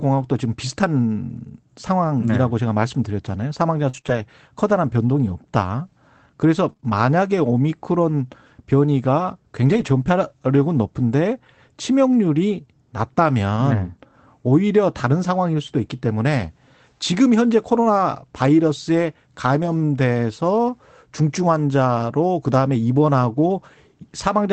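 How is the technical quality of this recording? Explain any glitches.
The speech has audible network-loss faults in three places, over a call path whose Opus coding limits the audio to about 8 kHz.

Between 3.89 and 9.90 s there are scattered short gaps: about five gaps from lost or late packets, each under roughly 40 ms. The receiver covered each hole by extending the preceding sound, leaving brief ticks and smeared hiccups.

At 19.62–19.68 s and 21.18–21.24 s, lost packets were rebuilt from error correction each time. The following packets carried low-bitrate copies, which suggests two packets per event. The decoder played those copies, so there is no gap, but those stretches sound momentarily rougher and noisier.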